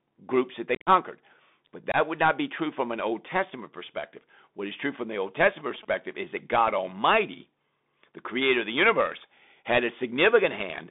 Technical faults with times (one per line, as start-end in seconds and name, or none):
0.00-10.90 Bluetooth CVSD headset codec
0.75-0.88 unconcealed Bluetooth headset packet loss
1.92-1.96 unconcealed Bluetooth headset packet loss
5.12-5.85 GSM signalling bursts